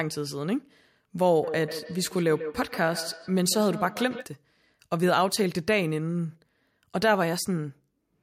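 From 1.43 to 4.30 s the speech comes back on itself at a steady interval of roughly 150 ms, peaking about 10 dB below the direct voice. This is feedback echo between two devices: a second device's microphone is recapturing another device's playback, which neither echo canceller is set to remove. Unlike room reverberation, the returns arrive as distinct, evenly spaced copies rather than a smooth decaying tail.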